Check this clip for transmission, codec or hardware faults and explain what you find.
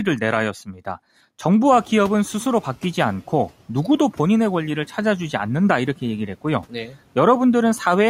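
The faults here come from the noise suppressor, not from transmission, codec or hardware. It twice swallows parts of the speech and once lags behind a sudden rise in background noise.

From 0.66 to 0.8 s and again from 6.7 to 6.96 s, the speech briefly sounds faint and swallowed, dipping by about 11 dB and about 10 dB. This is speech cut by the noise suppressor, which mistook roughly a tenth of a second of speech for noise each time.

From 1.72 to 2.85 s, after the room noise jumps by about 23 dB near 1.5 s, the noise comes through with less reduction at first and then sinks. This is the noise suppressor catching up: its noise estimate needed 1.13 s to adapt before it reached about 6 dB of reduction.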